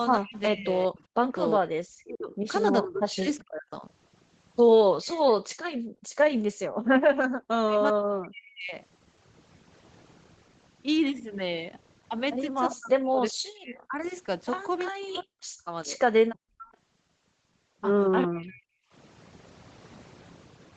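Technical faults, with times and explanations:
throughout, overdone noise removal: the background drops and breaks up into twinkling specks. A spectrogram shows a dark floor dotted with isolated bright flecks.
0.16–3.83 s, 6.86–8.74 s and 12.79–18.72 s, speech suppressed in double talk: the speech dips by up to about 40 dB or breaks into pieces, likely because the echo canceller turned both talkers down. The waveform shows chunks gouged out of the speech.
0.33–5.21 s and 12.71–18.56 s, echo leak: a faint copy of the speech trails about 0.4 s behind, some 20 to 25 dB down. It is likely loudspeaker echo that the canceller failed to remove. A spectrogram shows ghost harmonics shifted 0.4 s later.
5.46–6.58 s, background gated by the echo canceller: the room sound drops by about 40 dB for roughly 0.7 s in all as the canceller clamps the microphone. On the waveform the noise floor flattens to a line, then returns.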